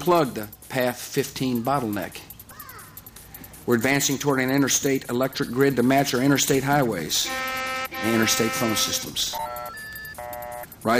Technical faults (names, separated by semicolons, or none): broken MP3 bit reservoir